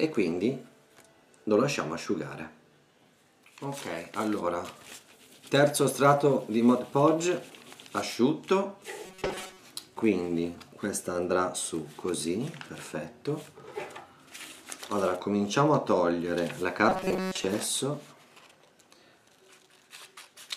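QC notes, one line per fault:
9.06–9.60 s and 16.89–17.44 s: robotic sound from repeated short buffers. For about half a second each time, the sound hardens into a rigid, metallic buzz pitched at 188 Hz that loosely tracks the original contour. The likely cause is audio arriving too slowly, so playback keeps looping a fragment of roughly 5.3 ms. That repetition imposes the fixed 188 Hz tone, and most of the real audio in each span is skipped.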